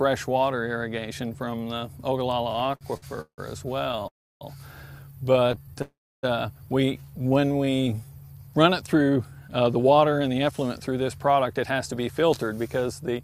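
From 2.53 to 3.40 s the audio shows repeated stalls (stutter): ten gaps, the longest 168 ms, add up to 344 ms of filled-in sound, about 40% of that span. The same pattern returns from 3.84 to 4.06 s (six gaps, none over 14 ms, 59 ms in total) and from 5.33 to 5.82 s (nine gaps, none over 16 ms, 99 ms in total). Each time packets came in late or too slowly, so the jitter buffer ran dry and the receiver kept extending the last sound until fresh data arrived. Nothing is lost, but the flow catches and drags. On a spectrogram the bands smear into short flat stretches, and the waveform shows small repeated blocks.

At 4.08 s the sound halts in a call audio freeze lasting 331 ms, and a second freeze of 410 ms follows straight after the third stutter, from 5.82 to 6.25 s. Each starts with a brief carry-over of the last sound, then about 310 ms of silence, and the audio resumes exactly where it left off. 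The likely cause is packets held up in the network, each wait adding its own length to the delay. Both freezes look like clear empty gaps on a waveform and blank columns on a spectrogram.

From 6.97 to 8.10 s a jitter buffer slow-down stretches the audio by 183 ms, so it plays at about 84% speed while the pitch stays the same. The receiver was building up a reserve by repeating single pitch periods and bits of pauses many times over, which draws sounds out. A spectrogram shows the harmonics unchanged in height but lengthened along the time axis, with a fine repeating texture.

From 9.49 s to the end, a jitter buffer speed-up runs the audio at about 109%, cutting roughly 0.4 s in total. The buffer held more than its target, so the receiver trimmed short stretches of one or a few pitch periods over and over, and the sound comes across as hurried at an unchanged pitch. On a spectrogram the features are compressed in time while their frequencies stay put, and the waveform has tiny splice points where pieces were taken out.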